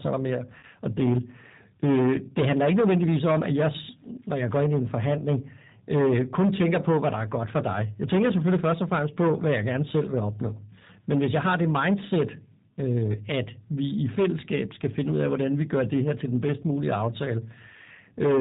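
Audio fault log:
Throughout: hard clipping. The level is driven about 14 dB past what the chain can pass, so around a tenth of the waveform had its peaks sheared flat at that limit. Those squared-off tops generate strong high-order harmonics that were never in the speech, and because the overload is this deep, nearly every stressed syllable comes out wrapped in a harsh, buzzing fuzz instead of an occasional crackle on the loudest peaks.
Throughout: G.729 codec damage, plainly audible. The speech passes through an 8 kbit/s VoIP coder that does not keep the waveform. It models each short stretch as a vocal tract filter excited by a pitch predictor and a few sparse pulses, then resynthesises from that model. Everything above 4 kHz is gone, which leaves a narrow telephone band. Voicing has a rough, slightly synthetic grain.
0.59 to 0.65 s: VoIP packet loss concealed by the speech codec. About 40 ms of the stream goes missing, which fits roughly four 10 ms codec frames. 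The decoder fills the hole by repeating its last pitch and filter settings at a falling gain, so the sound there stretches out and sags in level. Each frame is predicted from the previous one, so the speech stays thin and distorted for a short while after real data resumes.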